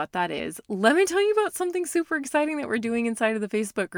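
Speech, with one case of compressed frames skipped at about 0.38 s. Roughly 30 ms of audio goes missing there, and the sound jumps ahead. The gap fits one lost frame of about 26 ms in the compressed stream. That frame was either absent from the file or thrown out by the decoder as damaged.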